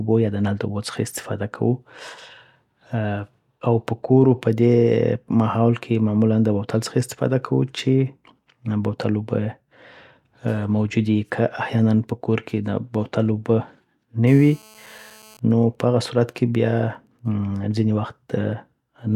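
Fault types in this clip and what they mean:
GSM phone buzz: A 2G handset near the recording chain is in an active call, transmitting radio bursts at about 217 per second, and the audio circuitry rectifies those pulses into the signal path. From 14.27 to 15.35 s this shows up as a hard, raspy 217 Hz buzz rich in harmonics. It is steady, has no relation to the speech, and sits about 27 dB below it.
GSM signalling bursts: The same phone then stops transmitting continuously because its user falls silent in the call. It sends only short groups of radio bursts, which the audio circuit still rectifies. From 15.35 to 17.55 s the steady buzz gives way to even ticks with a longer 217 Hz buzz twice a second. These are fainter than the earlier buzz, roughly 35 dB under the speech.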